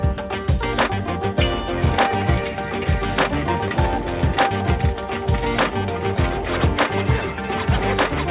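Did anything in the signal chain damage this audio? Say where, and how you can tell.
No, nothing in the signal chain stood out as damaging on listening; the audio carries the narrow bandwidth of a G.711 mu-law call path, with nothing above 4 kHz, as that codec normally delivers.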